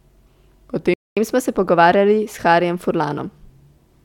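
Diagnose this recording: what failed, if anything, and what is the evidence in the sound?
The failure is at the playback stage: a playback stall. At 0.94 s the speech cuts off mid-flow and the output is silent until 1.17 s, a gap of about 230 ms. On a waveform this is a flat line with abrupt edges, and on a spectrogram a clean vertical band of nothing across all frequencies. The likely cause is the player's buffer running dry, or its audio thread being blocked, before output resumed where it had stopped.

Straight after the gap, from 1.17 s to 3.47 s, comes catch-up at higher speed. The player resamples its backlog to run 1.1 times faster, which raises the pitch by roughly a semitone and a half and makes the speech sound hurried. On a spectrogram the harmonics of the voice shift upward and the syllable spacing tightens, then both drop back to normal at 3.47 s once the lost time has been recovered.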